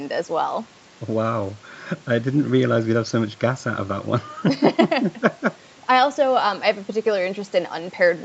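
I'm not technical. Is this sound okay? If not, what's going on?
Yes, nothing has gone wrong in this speech recording. It has the slightly muffled sound of an ordinary internet call, because the call's processing keeps nothing higher than about 8 kHz.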